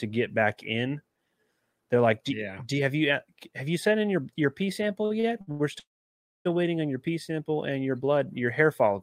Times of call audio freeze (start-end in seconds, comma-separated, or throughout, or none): 5.79-6.47